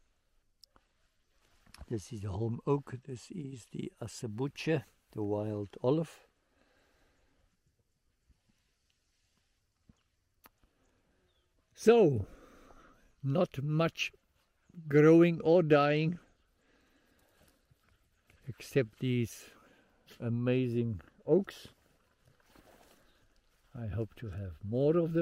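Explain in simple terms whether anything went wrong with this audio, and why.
Something did go wrong, twice. From 0.86 to 3.8 s and again from 15.34 to 19.03 s there is a Bluetooth SBC bit pool drop. The wireless link got crowded, so the phone sent less detail. The sound turns dull and gritty, then recovers.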